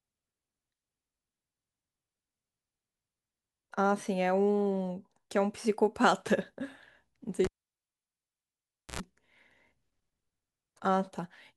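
At 7.45 s a live cable is pulled and plugged back in: a pop, 1.51 s of near silence, 87 ms of 60 Hz mains buzz, then another pop at 9.00 s.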